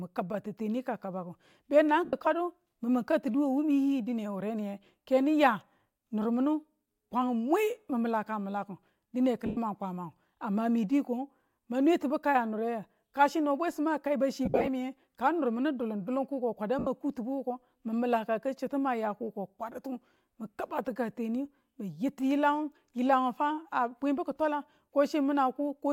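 Speech clip with four bursts of lost LE Audio frames, at 2.05–2.13 s, 9.46–9.57 s, 14.45–14.68 s (scattered gaps, longest run about 50 ms) and 16.79–16.87 s. Each gap is filled by the LC3 decoder's concealment, which repeats the last spectrum with randomised phase, so the speech briefly dissolves into a hissy smear.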